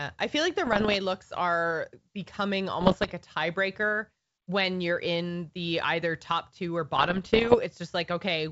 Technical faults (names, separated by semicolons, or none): bit errors on an ADPCM link